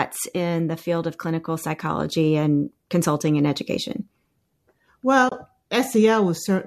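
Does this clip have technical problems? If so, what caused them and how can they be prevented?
Yes. From 5.29 to 5.32 s the speech drops out for about 30 ms. This is AAC frame loss with muting. The decoder set the missing frames' spectrum to zero, and the overlapping windows fade the sound down and back up, so the hole has soft edges. The length fits three of the short frames of the low-delay AAC coding that likely carried this clip. Forward error correction or a deeper jitter buffer would prevent it.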